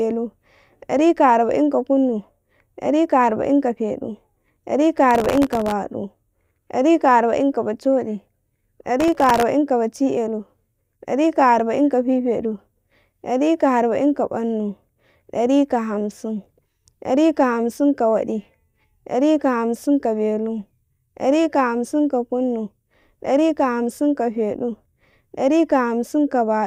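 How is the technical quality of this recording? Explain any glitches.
The recording has two bursts of processor overload crackle. The first runs from 5.11 to 5.72 s. The second runs from 9.00 to 9.43 s. In each, the processor falls behind and misses dozens of buffer deadlines again and again. The buffers are very short, well under a millisecond, which fits the fine grain. Each miss replays a scrap of old audio with hard edges. The result is a gritty tearing over the speech that stops once the load clears.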